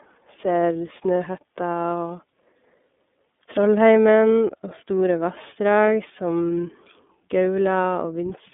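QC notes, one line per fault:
Throughout, iLBC codec: the speech sits in a narrow 200 Hz to 3.6 kHz band with a plainly rough, slightly synthetic edge. Each frame's excitation is coded on its own, and the texture fits the 13.33 kbps mode with its 30 ms frames.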